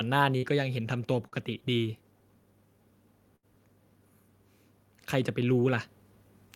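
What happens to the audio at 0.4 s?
Around there, from 0.37 to 0.46 s, there's a burst of packet loss. About 53 ms gets papered over by stretching and fading the last sound, then roughly 60 ms of speech simply goes missing.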